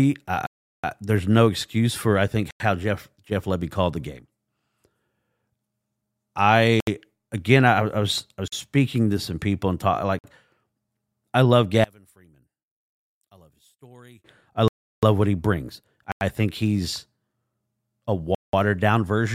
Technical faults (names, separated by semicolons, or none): block of digital silence; one channel inverted